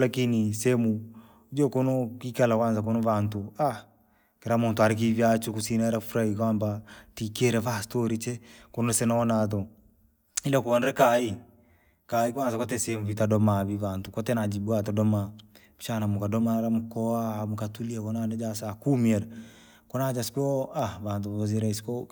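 Speech, with channel delay (comb filtering) from 10.64 to 13.17 s. Here the sound turns hollow and phasey. One channel arrives roughly 10 ms late. When both are summed to mono, shared content cancels at evenly spaced frequencies. The lowest notch sits near 40 Hz.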